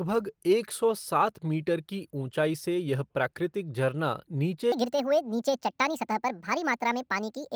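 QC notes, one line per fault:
4.72–7.56 s: section at the wrong speed. From 4.72 s to the end the speech runs 1.6 times too fast, pitch rising about seven semitones, likely from a clock mismatch during editing or playback. On a spectrogram the harmonics jump upward and spread apart; the waveform's syllable envelopes compress.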